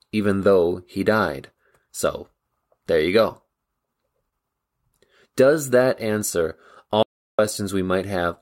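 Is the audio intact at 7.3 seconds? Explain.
No, at 7.3 s you're inside an audio dropout to silence from 7.03 to 7.39 s, likely a lost input writing silence, so the speech cuts to dead-flat silence.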